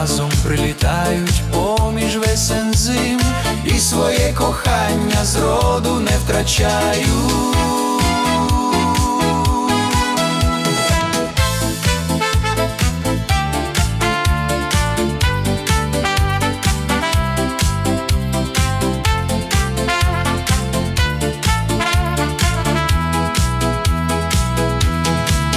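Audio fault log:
No faults detected.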